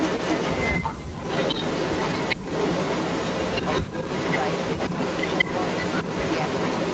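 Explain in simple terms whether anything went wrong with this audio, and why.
Yes, two things went wrong. Most likely, an echo canceller on a loudspeaker end let sound leak back. This echo leak adds a copy about 0.17 seconds late, slightly louder than the original, from 0.0 to 0.83 s and from 1.16 s to the end.

The canceller also likely mistook overlapping talk for echo and turned it down. This speech suppressed in double talk nearly silences the talker from 0.83 to 1.23 s, with shorter dips at 2.36 to 2.43 s and 3.84 to 3.93 s.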